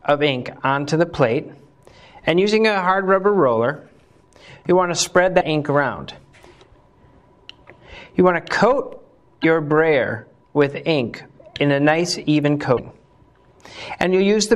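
At 5.40 to 5.43 s, 9.42 to 9.45 s and 12.76 to 12.79 s the sound breaks for about 30 ms, a span that fits a single MP3 frame of roughly 26 ms. The likely cause is a broken MP3 bit reservoir. When frames go missing, the next frame reaches back for borrowed bits and decodes bytes belonging to a different frame. That yields a jump forward in the audio.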